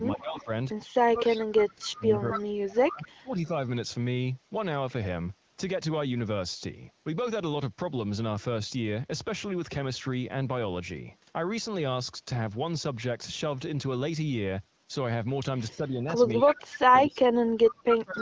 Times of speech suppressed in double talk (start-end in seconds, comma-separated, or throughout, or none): 0.15-0.50, 1.00-3.49, 15.69-18.22